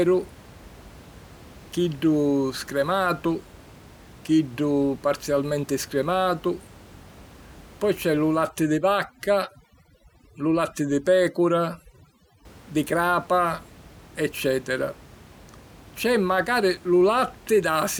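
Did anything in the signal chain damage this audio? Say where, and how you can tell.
Yes. Overdone noise removal in the call-processing stage, from 8.49 to 12.45 s, pushes frequency bands near its noise estimate far down, taking quiet speech detail too. The room noise, about 24 dB below the speech, drops and breaks up into twinkling specks.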